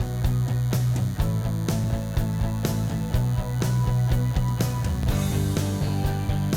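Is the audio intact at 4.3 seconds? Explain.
No. DECT cordless phone buzz runs through the whole clip, including 4.3 s: 100 Hz radio bursts rectified into a thin harmonic buzz, roughly 25 dB below the signal.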